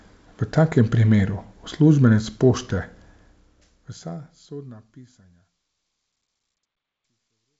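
No technical faults can be heard in this speech. The level fades out smoothly from around 3 s to the end, and the G.722 wideband telephone coding at 64 kbit/s leaves nothing above 7.7 kHz.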